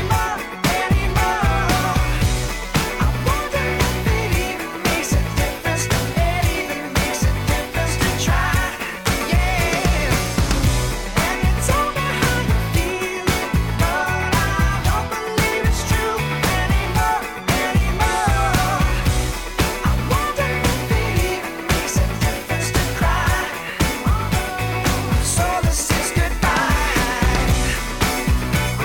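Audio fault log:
0.0–4.0 s, adaptive stream starting at a low bitrate: the player opened on a cheap rendition so playback could begin at once, then switched to a richer one after gauging the connection. For the first four seconds the top end sounds thin and partly synthesised, with heavier codec artefacts, which fits a low-bitrate HE-AAC stream near 40 kbit/s. At 4.0 s the quality jumps abruptly without any gap, consistent with AAC-LC at 96 kbit/s, and the treble then extends to about 18.5 kHz.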